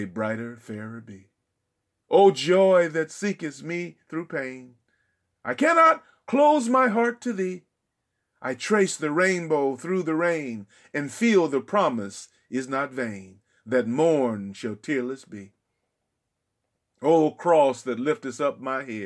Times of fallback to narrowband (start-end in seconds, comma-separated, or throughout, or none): none